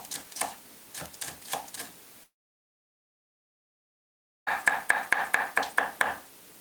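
From 2.23 to 4.49 s the sound trails into a fading buzz, then silence for 2.18 s, resuming past the gap: likely a long network dropout.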